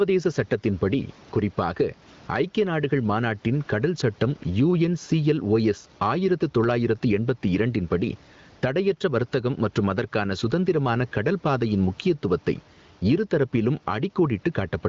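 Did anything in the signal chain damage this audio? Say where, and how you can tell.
Yes. Gain pumping runs throughout: the gain swings by around 10 dB whenever the speech gets loud, squashing loud and soft parts together. The likely cause is excessive input gain, with a fast limiter in call processing clamping each peak.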